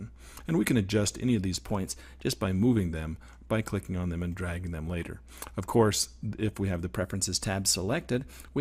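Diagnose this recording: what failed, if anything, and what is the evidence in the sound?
From 1.57 to 2.36 s and again from 6.95 s to the end, the sound runs about 6% fast and about a semitone sharp, snapping back only after the first stretch. This is likely a drift correction step in the buffer stage.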